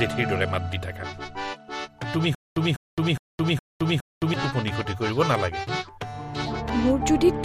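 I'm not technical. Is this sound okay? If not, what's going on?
No. From about 2.35 to 4.34 seconds there is a stutter with silent gaps. A short burst of sound, about 0.2 seconds long, plays five times in a row. Each repeat is followed by about 0.22 seconds of complete silence, so the pattern returns roughly every 0.41 seconds. The likely cause is that playback stalled and kept retrying the last fragment before running out again. Whatever should have played during those two seconds is missing.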